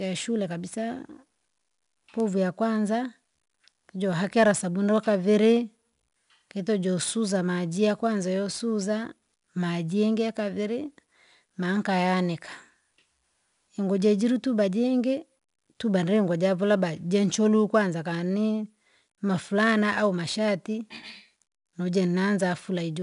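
A speech recording carrying 4-bit ADPCM compression throughout, with plainly audible codec damage: a gritty hiss rides on every louder syllable, because each sample is coded as a coarse step from a prediction and the quantisation noise rises and falls with the level. On a spectrogram the noise fills the gaps between harmonics during loud passages, and nothing appears above 10.6 kHz, which fits a sample rate near 22 kHz.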